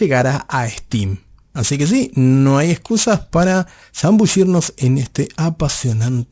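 Aliasing persists throughout: unfiltered downsampling, pointing to a 16 kHz rate, folds energy above 8 kHz back down, leaving sibilants gritty and metallic.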